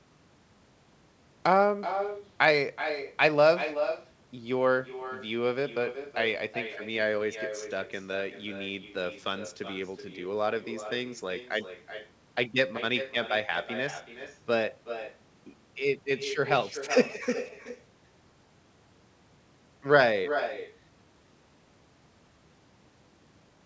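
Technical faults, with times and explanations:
Throughout, echo with no canceller: each phrase returns as a quieter copy, about 10 dB below the speech, after roughly four tenths of a second. The far end's loudspeaker feeds its microphone, and nothing subtracts the signal before it travels back. Unlike room reverberation, which smears into a tail, this is a distinct, delayed repeat that sounds thinner than the original. The echo, like the speech, stops at 8 kHz.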